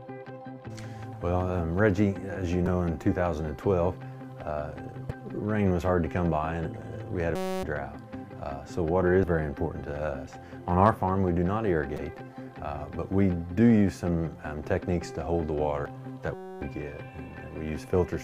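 You'll catch damaged data in the compressed stream at 2.64–2.68 s and 5.07–5.11 s: corrupted frames throw the decoder off sync, so it glitches briefly. Then at 7.36–7.63 s there's a system hang loop, where a 5.33 ms chunk, which fits a 256-sample buffer, repeats as a steady 188 Hz buzz, and about a third of a second of audio goes missing. More stream damage follows at 9.23 s, 11.95–11.99 s and 15.86 s, and a second identical hang loop buzzes at 16.34–16.61 s.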